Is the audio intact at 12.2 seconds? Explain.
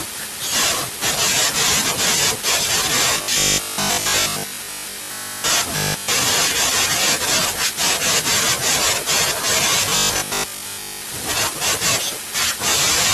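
Yes, the speech at 12.2 seconds is intact, with no audible fault at that moment.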